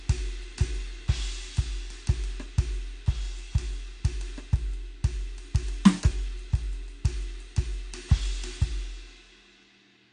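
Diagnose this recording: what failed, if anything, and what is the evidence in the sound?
The failure sits at the codec stage and runs through the whole music clip. Nothing is present above about 9.9 kHz, so the top octave is simply gone and the mix sounds dull. Codec damage is plainly audible, with a smeared, warbling texture on sustained tones. The likely cause is AAC compression at a low bitrate, around 32 kbps. The encoder lowers its cut-off, starves the remaining bands of bits, and leaves gaps it fills crudely.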